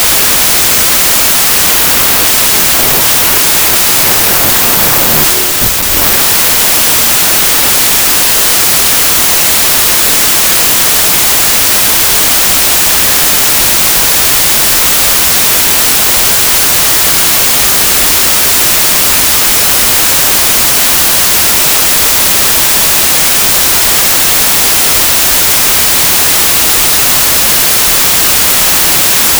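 Throughout the clip, a wrong sample width fault sounds like packed 24-bit audio read back as 16-bit samples. Mismatched bytes form most values, so loud hiss buries the real signal, which plays at about two-thirds speed with lowered pitch.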